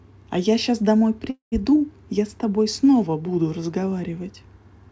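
Speech carried over a call path with nothing above 8 kHz, which fits G.722, and one call audio freeze from 1.30 to 1.54 s. The last sound is held as a fading buzz or hiss that falls to 120 ms of silence. Speech then resumes exactly where it stopped, running 220 ms late with nothing lost. The likely cause is delayed packets leaving the jitter buffer empty.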